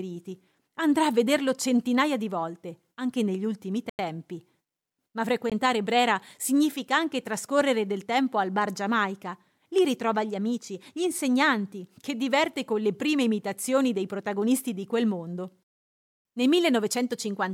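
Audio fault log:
3.90 to 3.99 s and 5.50 to 5.52 s, Bluetooth stall: right after "volte anche negli ultimi" the speech drops to dead silence for about 94 ms, then carries on from where it left off. A second, much shorter gap of about 18 ms follows at 5.50 s. That clean cut-and-resume pattern is most likely the headphones' buffer running empty while radio interference held up packets, with playback pausing until the resends arrived.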